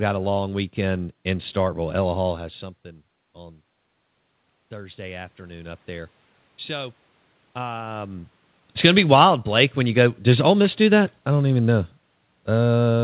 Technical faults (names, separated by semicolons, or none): automatic gain rising; automatic gain falling